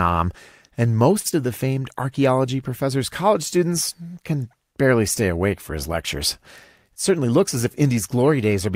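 From 1.19 to 1.27 s the sound is held too long with a slight buzz or dip, a short stall from a late packet: the jitter buffer ran dry and 58 ms was stretched, adding 58 ms of delay.

A brief smear or wobble at 1.31 to 1.34 s is short concealed packet loss. About 20 ms never arrived, and the receiver bridged the gap by extending the preceding sound.

Between 7.10 and 7.91 s the speech sounds hurried at unchanged pitch. This is a jitter buffer speed-up: playback ran at 107% as the receiver trimmed around 70 ms of excess buffered audio.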